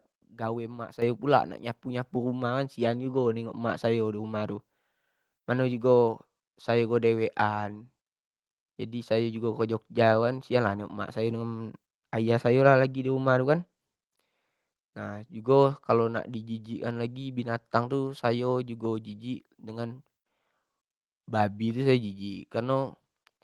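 At 1.02 s the level jumps abruptly, voice and background rising together by about 8 dB, and at 2.04 s a second, smaller step of about 3 dB follows. Both are instances of the microphone volume being stepped up: the call software judged the input too quiet and raised the device's input gain in a single step rather than ramping it, so the speech lands at a sudden new loudness, carried over a call path whose band stops around 12 kHz.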